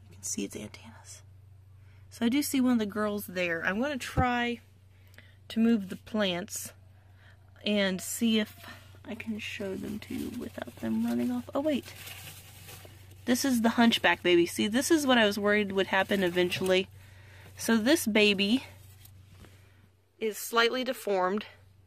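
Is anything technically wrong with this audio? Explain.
Yes. DAB burbling occurs at about 18.53 s. Weak reception let bit errors slip past the error correction into the MP2 audio data, corrupting samples so that individual sub-bands get short blips of noise. The damage is compact and points to a handful of affected frames at a bit error rate of roughly a fifth of a percent. It comes across as a few short watery blips laid over the sound.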